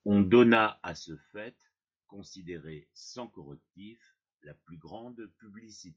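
From 0.52 to 1.04 s the speech carries zipper noise: the level drops by about 15 dB in coarse 2 dB steps, around fifteen a second, with no smoothing between them. Each jump leaves a small click, so a ticking zip rides on the speech while the level falls. On a waveform the envelope descends like a staircase, and a spectrogram shows faint vertical broadband lines at each step.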